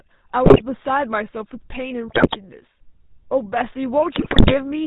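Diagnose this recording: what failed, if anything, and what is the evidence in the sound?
The speech passed through the GSM full-rate codec, a codec-stage fault present for the whole clip. This coder rebuilds the voice from a vocal-tract filter driven by regularly spaced excitation pulses, keeping only a third of the excitation samples, and the plainly audible damage fits its 13 kbps rate. Nothing survives above 4 kHz, so the sound is dull and band-limited, with a constant buzzy, gravelly roughness laid over every syllable.

GSM bit errors on the radio link hit the decoder three times, at 0.44 to 0.62 s, 2.08 to 2.37 s and 4.16 to 4.59 s. Corrupted filter, pitch and gain parameters reach the synthesiser, so individual frames come out with a warped spectrum or a sudden jump in level. In each window the speech breaks into squawks, pops and gargling. The density of the corruption points to an error rate of roughly 5.5 to 7.5 percent.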